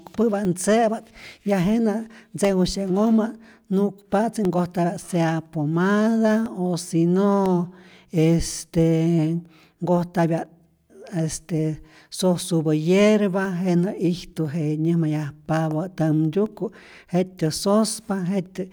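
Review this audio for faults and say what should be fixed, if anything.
Periodic USB or driver dropouts run from 0.45 s to 18.46 s, once every 1.0 s, each a tiny gap of around a millisecond filled with silence. Some background task is stalling the bus or audio driver on a fixed schedule, so each gap lands as a regular tick through the speech. Preventing it means finding and disabling the recurring system task, or giving the audio interface its own USB controller and a larger driver buffer.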